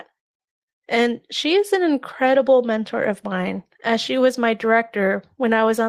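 A speech recording with nothing technically wrong with it.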